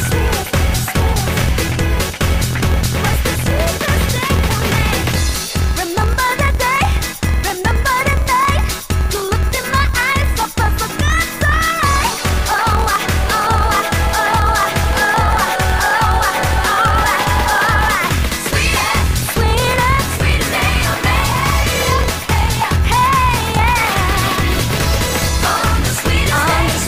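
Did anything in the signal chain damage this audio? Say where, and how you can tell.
Yes, and it happens at the driver or buffer stage. The whole clip carries a steady buzz at about 43.1 Hz and plays roughly 12% fast with its timbre intact. That's a block size mismatch (truncated). Each block arrives longer than the next stage is prepared to read, so it keeps only the first part, which fits a 1024-sample read, and drops the tail. Those regular splices produce the buzz at the block rate and squeeze the timing.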